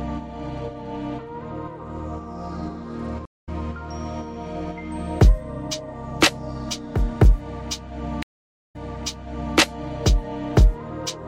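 Stream reconnect at 3.25 to 3.49 s and again at 8.23 to 9.58 s: the connection dropped, playback fell silent, and a fresh decoder joined mid-stream. The first gap lasts 166 ms and the sound picks up roughly 150 ms further along, so a short stretch is skipped. The second gap runs 465 ms, then playback resumes 888 ms earlier, replaying material already heard, as a resent burst would.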